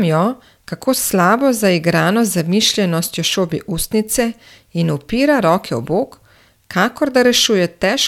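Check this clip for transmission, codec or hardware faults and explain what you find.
Listening through the speech, I find no transmission, codec or hardware faults to report.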